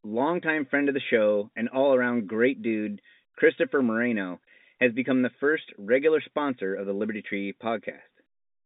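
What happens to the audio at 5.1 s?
Nothing goes wrong at 5.1 s: the speech carries on intact through that moment, with only the usual narrow telephone band of the G.711 line.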